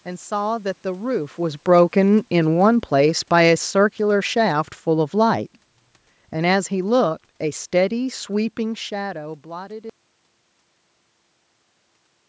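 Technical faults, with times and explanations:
1.57–5.58 s: automatic gain falling. The gain control judged the input too loud and eased it down about 6 dB. Speech and background sink together.
9.9 s to the end: audio dropout to silence. The sound cuts to silence, with no room tone. The input was likely lost while recording continued.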